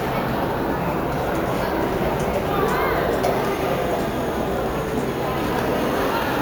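Throughout, imaging from sample-and-hold upsampling (16 kHz raised to 48 kHz) leaves mirrored copies at 8 to 16 kHz, about 21 dB down. The metallic fizz tracks the sound's level, unlike steady hiss.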